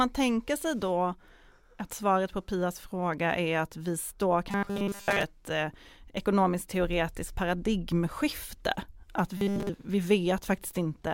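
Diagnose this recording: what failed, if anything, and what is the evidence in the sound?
The robotic sound from repeated short buffers points to the driver or buffer stage. It occurs from 4.51 to 5.23 s and again from 9.37 to 9.69 s. Both passages carry a rigid, metallic buzz at 200 Hz. That pitch matches a repeating slice 5 ms long. In the first passage the repetition covers most of the span. In the second it covers all of it. New audio likely arrived too late, so the last few milliseconds were looped while real audio was dropped.

The repeated frames fault sits in the codec or storage stage. At 9.80 s a short stretch of the compressed stream plays twice. The duplicated block lasts 46.4 ms, which fits two codec frames. It is heard as a brief stutter. The repeat plays once, so the clip runs 46.4 ms longer than the original.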